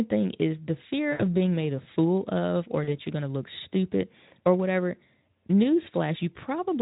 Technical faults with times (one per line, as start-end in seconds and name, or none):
1.11-1.27 VoIP packet loss concealed by the speech codec
2.83-2.97 VoIP packet loss concealed by the speech codec